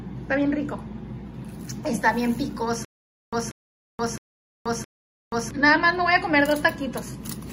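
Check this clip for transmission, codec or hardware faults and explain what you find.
One fault appears, from 2.85 to 5.51 s: a stutter with silent gaps. The same 186 ms burst repeats four times at a steady 665 ms pace with digital silence between, likely a stalled stream replaying its last fragment. Exact repeats set it apart from random dropouts.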